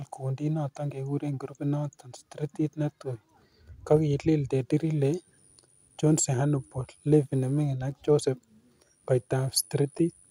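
Speech with three brief clicks, at 3.97, 7.98 and 9.99 s, each a tiny stutter where a sliver of sound seems to play twice. This is overlapping chunks: the audio was handled in 2-second blocks, and at these joins each new block begins slightly before the previous one finished, so about 6.5 ms of material is repeated. That doubled fragment breaks the waveform's continuity, producing the click heard at each boundary.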